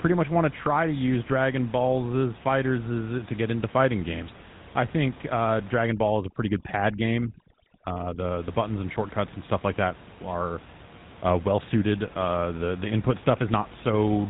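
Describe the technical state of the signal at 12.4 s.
At 12.4 s the speech is still passing through the GSM full-rate codec, which affects the entire clip rather than this moment alone. The coder rebuilds the voice from a vocal-tract filter driven by a sparse, regularly spaced pulse train, a scheme that fits a 13 kbps full-rate link. The damage is plainly audible: a buzzy, gravelly roughness on the voice, and nothing above 3.9 kHz, so it sounds dull. The room noise, about 21 dB below the speech, sits underneath.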